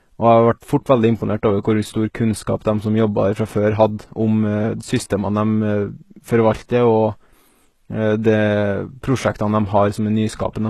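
HE-AAC compression runs throughout this speech. The damage is plainly audible, and it fits a bitrate near 16 kbps. The codec likely keeps only the lower spectrum and rebuilds the treble by copying bands upward. This leaves misaligned harmonics, gritty, lispy s sounds, and nothing above 12.3 kHz.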